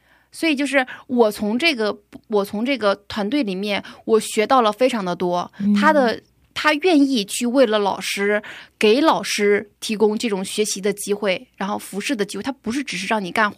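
No technical faults turn up anywhere in this speech recording; the signal runs without dropouts, clicks, distortion or other disturbances.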